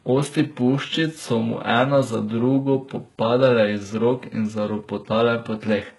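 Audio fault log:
throughout, HE-AAC compression: the speech has no content above about 11.5 kHz, and the treble that remains sounds synthetic, with gritty, lispy s sounds. This is likely spectral band replication rebuilding the upper band from copied lower bands, with heavy damage consistent with roughly 12 kbps.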